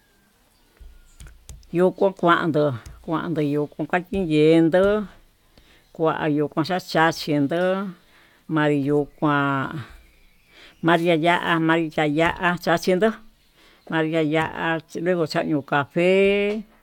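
Speech recording with no technical fault to point to. Nothing in it calls for a time, a cause or a correction.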